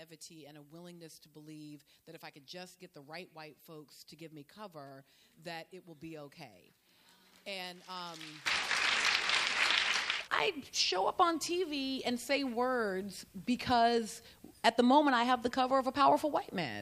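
From the start to 8.46 s, one stereo channel has likely been flipped in polarity, the one channel inverted fault. Whatever the two channels share then cancels once they are summed to mono, so the level falls by about 20 dB. Centred material and low end nearly disappear, leaving only the difference between the channels: a faint copy of the sound. From 8.46 s onward the polarity is no longer reversed.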